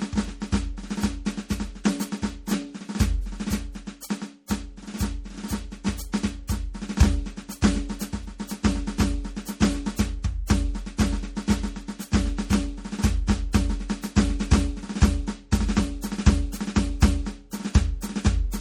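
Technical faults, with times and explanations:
Throughout, MP3 compression: the music sounds watery and swirly, with metallic chirps on bright sounds and nothing above 18.7 kHz. This is likely an MP3 encoder short of bits, which fits roughly 48 kbps, cutting the treble and letting weak frequency lines flicker between frames.
1.84 s, 6.12 s and 6.47 s, pre-echo: each sharp attack arrives softened, with a short hiss running ahead of it for about 11 to 13 ms. The codec spreads noise meant for the loud hit across its whole block, filling the quiet moment before it.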